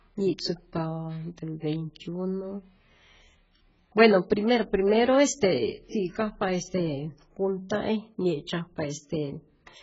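Throughout, the speech sounds dull and warbly with fizzy sibilants, likely from heavy AAC compression at a very low bitrate. A spectrogram shows nothing above 7.6 kHz.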